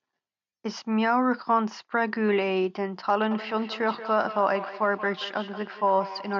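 From 3.31 s to the end, feedback echo between two devices appears. Each word returns about every fifth of a second, thinner and ringing, peaking about 13 dB below the speech.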